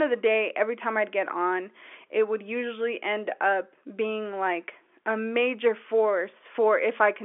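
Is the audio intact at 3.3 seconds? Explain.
Yes, the speech at 3.3 s is intact, with only the narrow, telephone-band sound of G.711 coding, which passes nothing above about 3.7 kHz.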